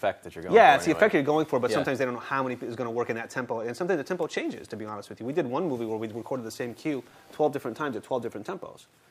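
No technical faults can be heard anywhere in the signal.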